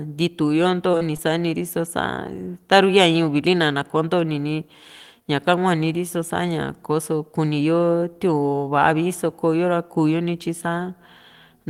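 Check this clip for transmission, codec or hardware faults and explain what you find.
One fault appears: short concealed packet loss, three times in close succession, at 0.91 to 0.95 s, 0.97 to 1.03 s and 1.17 to 1.20 s. About 20, 40 and 20 ms of speech never arrived in time, so the receiver extrapolated the preceding sound to cover each gap before blending back, leaving brief smears or wobbles where short sounds may vanish.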